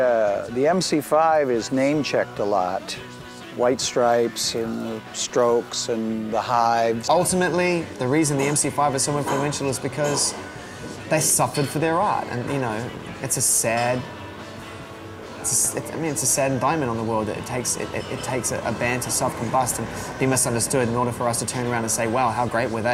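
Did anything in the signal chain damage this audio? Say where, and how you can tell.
No, no chain damage heard.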